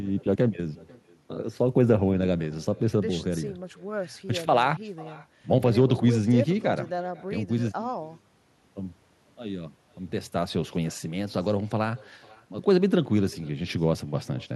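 Throughout, echo with no canceller: a faint copy about 27 dB down returns roughly half a second later, a distinct delayed repeat rather than the continuous smear of room reverberation.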